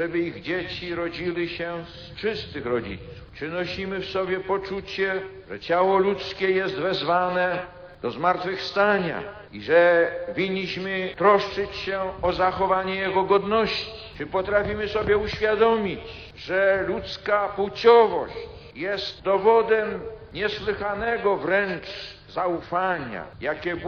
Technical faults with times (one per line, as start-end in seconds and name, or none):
none